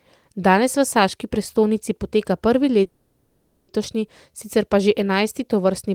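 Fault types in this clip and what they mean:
call audio freeze: Right after "saški prestolnici poteka prvi", at 2.86 s, the last bit of sound gets smeared out into a fading, buzzy or hissy fill that runs until 3.70 s, so about 0.82 s, with no true silence in there. Then the speech picks up exactly where it stopped. Nothing's skipped, it's just pushed 0.82 s later. That's likely packets held up in transit draining the jitter buffer, so the receiver papered over the wait.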